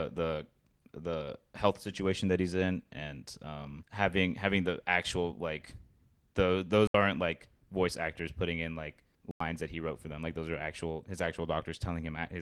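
At 6.87 s and again at 9.31 s the speech drops out in a block of digital silence, lasting about 70 ms and 93 ms respectively. The output was filled with zeros, most often because the program did not fill its buffer in time, and the second gap fits a 4096-sample buffer. Both cut out and back abruptly with no fade, heard as short holes. The Opus voice coding around them is light.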